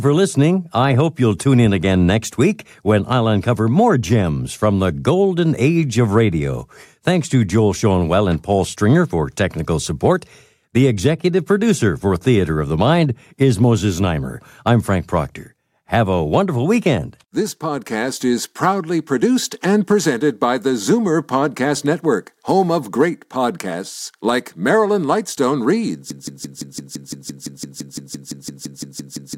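At 26.1 s the speech locks into a broken-record loop: a chunk of about 170 ms plays back to back, identically, roughly 19 times, and it keeps going right to the end of the clip. The stutter has a very regular, mechanical rhythm. Whatever should have been heard in those last three seconds or so is simply gone. The likely cause is a player, encoder or stream stalling and re-sending the last fragment it had buffered.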